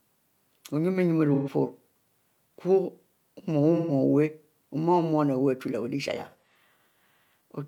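AAC frame loss with concealment occurs at 1.33–1.49 s and 3.76–3.92 s in this speech clip, then scattered across 6.15–6.58 s in runs of about 40 ms. The decoder patches each gap from the last good spectrum, leaving short smeared, phasey spots.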